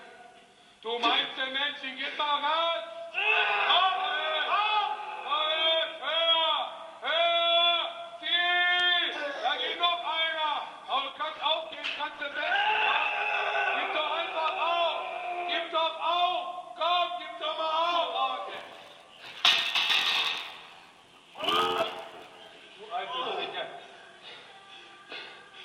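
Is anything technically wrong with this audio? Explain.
Yes, two faults. From 11.12 to 13.12 s, an adaptive stream at a lower bitrate: the connection slowed, so playback switched to a leaner encoding, roughly 64 down to 16 kbit/s. Codec artefacts rise suddenly, with no gap.

From 18.53 to 22.62 s, a block size mismatch (padded): a stage writes short blocks and zeros fill the rest, which fits a 512-sample read buffer. The sound buzzes at 86.1 Hz and runs at 0.861 times normal speed, timbre essentially unchanged.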